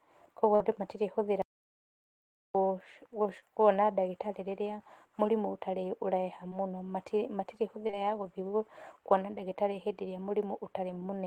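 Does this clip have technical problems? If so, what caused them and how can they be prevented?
Yes. Short concealed packet loss occurs at 0.55 to 0.62 s, just before "andũ matirĩ hũthĩra", then at 3.40 to 3.44 s, 6.50 to 6.53 s after "ĩrĩa mũrimũ ũtarĩ ũreha", and 7.87 to 7.95 s. Each gap, consistent with lost 20 ms packets, was patched by extrapolating the preceding speech, giving brief smears or wobbles. A larger jitter buffer, forward error correction or a more stable network connection would prevent this.

An audio dropout to silence runs from 1.42 to 2.55 s, right after "andũ matirĩ hũthĩra". About 1.13 s of speech is replaced by silence with no room tone, most likely from the input device or link dropping while the recorder kept writing silence. Secure cabling, reliable links and input-level monitoring during recording would prevent it.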